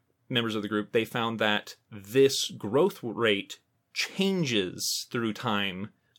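No technical faults can be heard in the signal at any point in the recording.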